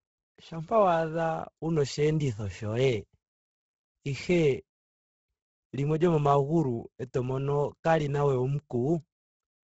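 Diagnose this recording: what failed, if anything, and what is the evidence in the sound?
The codec stage failed, and the damage runs through the whole speech recording. Nothing reaches above 7.8 kHz. The upper band that remains sounds breathy and grainy, with noise standing in for real detail. The damage is heavy and constant. The likely cause is Bluetooth LC3 compression. Starved of bits, the transform codec drops most high-frequency content and fills the gaps with noise. The grain fits a low rate around 16 kbps with 10 ms frames.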